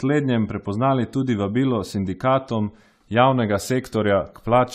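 Throughout the speech, the likely cause is generation loss: around ten rounds of decoding and re-encoding through a lossy codec that sounds like AAC-LC near 96 kbit/s. Each pass requantises on a shifted frame grid, so the audio turns swirly, hollow and smeared, onsets blur, and nothing remains above 15.8 kHz.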